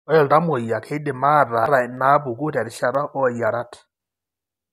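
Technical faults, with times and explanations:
1.66 s, damaged data in a compressed stream: a brief glitch. Corrupted bytes made the decoder misread the frame there, lose sync and jump to the next valid frame header, so the sound briefly garbles.
1.97 s and 2.95 s, dropped samples: two isolated sharp clicks, each a thin vertical line across the spectrum. The likely cause is a tiny fraction of a millisecond of audio going missing, so the waveform leaps abruptly to a later value with no audible gap.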